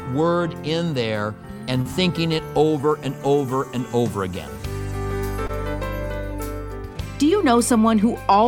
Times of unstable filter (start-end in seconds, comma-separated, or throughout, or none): none